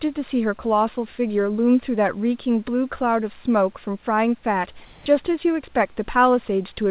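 From 4.85 to 5.06 s, a pause of about 210 ms has its background replaced: the room's textured hiss gives way to a steady, featureless noise at nearly the same level, only about 1 dB different, before the real background returns. This is likely comfort noise in place of the background, generated at the receiver while discontinuous transmission paused the sender. A noise gate or dropout would fall to silence. Here the gap stays filled, just smoothed, with nothing above 4 kHz, as on the rest of the narrowband call path.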